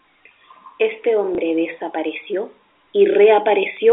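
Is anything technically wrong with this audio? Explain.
Yes. There is one fault in this speech clip, a packet loss with the last packet repeated. It happens from 1.35 to 1.38 s. About 30 ms of audio is missing, which points to a single lost packet. The receiver filled the gap by playing the previous packet again. The result is a small blip. It sits over narrow telephone-band sound, with nothing above about 3.5 kHz, which fits G.711 telephone coding.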